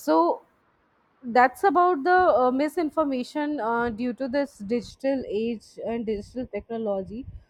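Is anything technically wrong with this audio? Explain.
Yes. From 4.91 s to the end at 7.50 s, the speech turns hollow and phasey, as if heard through a tube, with a scooped quality that stays fixed. This is channel delay (comb filtering): one channel arrives a fraction of a millisecond late, under half a millisecond, and when the two are summed to mono, shared content cancels at evenly spaced frequencies. The first notch sits around 1.5 kHz, with more repeating above it.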